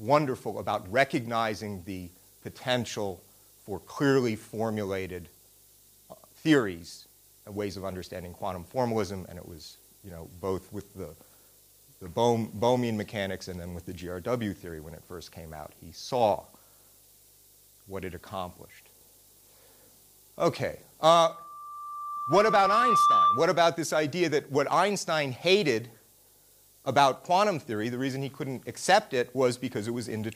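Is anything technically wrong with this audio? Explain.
Yes. From 21.29 to 23.66 s there is loudspeaker feedback squeal: a microphone re-amplifies its own loudspeaker, so a 1.2 kHz tone swells over roughly two seconds to about 5 dB above the sound. Unlike a steady interfering tone, it builds on itself.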